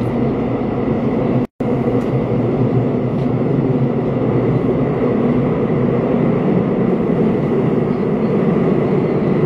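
At 1.45 to 1.60 s, a gap at a join of encoded pieces: about 150 ms of silence, left over from encoder padding, before the sound resumes exactly where it stopped. Unlike a dropout, nothing is skipped.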